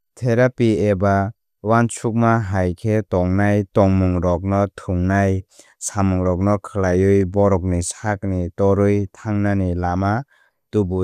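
No audible technical faults.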